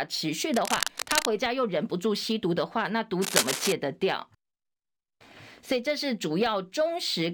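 Cable scratch noise at 0.48 to 1.29 s and 3.21 to 3.72 s: dense rustling bursts, about 5 dB below the speech and then about equal to it, likely from a worn, jostled connector.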